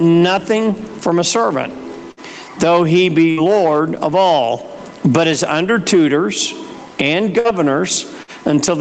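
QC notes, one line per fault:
throughout: gain pumping. The level keeps surging and sagging by roughly 20 dB, leaving loud and quiet passages squashed together. The likely cause is input gain set far too high, with a fast limiter clamping down on each peak. On the waveform the envelope looks flattened, with noise floors rising between peaks; a spectrogram shows the broadband noise brightening and darkening against the 8 kHz ceiling of the call audio.
2.11–2.20 s, 3.31–3.40 s, 7.39–7.48 s, 8.23–8.31 s: burst of packet loss. At each spot the receiver stretched the last received sound for about 50 to 60 ms, fading it into a held buzz or hiss, then resumed with roughly 60 ms of the original audio skipped, which fits a few consecutive packets going missing. On a spectrogram each shows a frozen, smeared band that dims, then an abrupt jump; the waveform shows a repeating, decaying pattern and a discontinuity where playback picks up.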